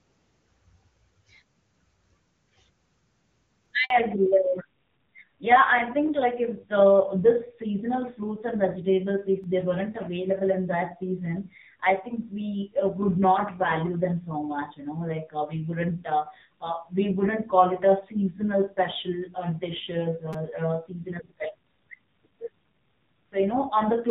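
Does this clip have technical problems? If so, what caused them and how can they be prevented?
Yes. Three kinds of fault are audible.

Repeated buffer: at 3.66 s, 9.43 s and 20.33 s the device replayed its last block of audio, about 5 ms long, because fresh data arrived late. The first two repeat once and sound like brief clicks. The one at 20.33 s repeats three times, giving a short buzz. Larger playback buffers or higher scheduling priority for the audio thread would prevent these underruns.

Handover gap: from 3.84 s to 3.90 s the call was passed between networks, and no speech frames came through during the switch. The sound drops to silence for 60 ms, and whatever was said in that window is lost. Make-before-break handover, or better packet loss concealment to bridge the gap, would prevent this.

Fallback to narrowband: before 3.90 s the AMR wideband (HD Voice) codec carries clear wideband speech. 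From 3.90 s to the end, nothing above 4 kHz remains, and the speech is duller and rougher. That points to a switch to the narrowband AMR codec at one of its low bitrates. Keeping the new network cell HD Voice capable, and negotiating wideband again after handover, would avoid the downgrade.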